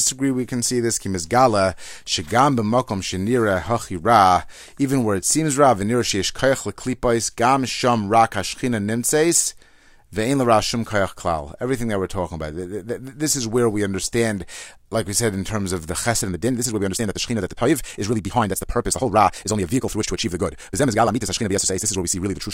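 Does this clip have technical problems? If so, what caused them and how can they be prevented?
Yes. From 16.17 s to the end, right after "in terms of the", the speech suddenly runs 1.77 times faster but keeps its pitch. It sounds rushed, likely a time-stretched section in which short pieces were dropped to fit a length. A plain speed-up would also raise the pitch. Prevent it by trimming content to fit the target length rather than squeezing the audio in software.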